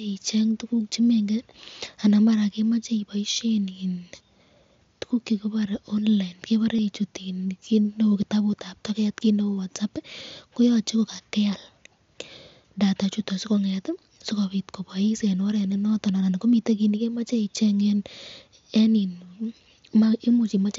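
At about 6.77 to 6.79 s, just after "tukuk chekibare online", there is concealed Bluetooth headset packet loss. A short run of voice packets from the headset never arrived. The receiver filled the gap by repeating the closest-matching piece of the waveform it had just played. The gap is about 22.5 ms, which fits roughly three lost packets. It sounds like a brief buzzy tone at full level, with a slight warble as real speech resumes. The wideband mSBC link adds a light graininess.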